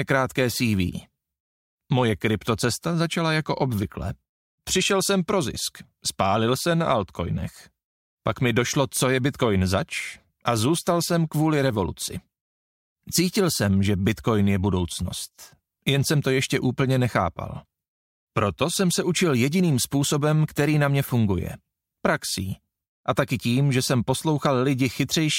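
No technical faults detected.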